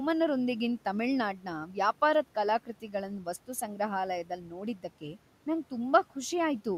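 Speech with the noise suppressor cutting into it at 1.33–1.47, 1.66–1.77, 2.66–3.27, 4.24–4.53 and 4.75–5.17 s, where soft parts sink by about 9 to 12 dB and sound swallowed. Unlike dropouts, the room noise, about 23 dB down, dips with them and nothing goes silent.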